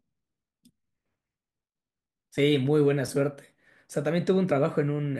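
At 2.37 s and 4.50 s, compressed frames are skipped. About 20 ms of speech vanishes each time, fitting one 21.3 ms frame. Each time the speech jumps ahead at the join.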